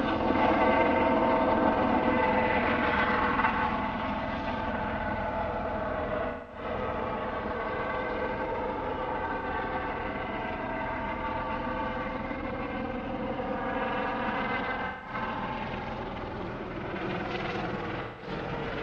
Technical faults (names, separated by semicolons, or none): AAC frame loss with concealment